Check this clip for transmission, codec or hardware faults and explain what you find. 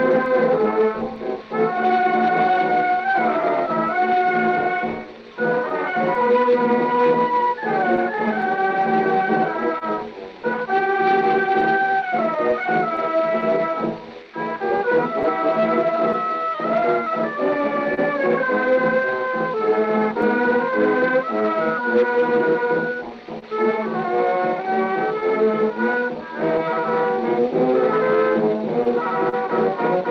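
Three related faults appear, all tied to timing between the two ends.

Clock drift between sender and receiver runs throughout. The sender's clock is about 2% slow. The receiver's buffer keeps draining, so it must stretch the audio. This leaves small, uneven timing hiccups across the whole clip.

Repeated timing corrections run from 0.18 s to 28.17 s. To cover the shortfall, the receiver repeats short pieces, playing at about 99% speed. Roughly a third of a second is added in total. Each edit is small, and they come unevenly spaced.

Scattered short gaps appear from 0.26 s to 29.35 s. There are around thirty small holes, each patched by continuing the last sound. The longest is about 30 ms, and roughly a third of a second is filled overall. They come through as brief ticks or smears.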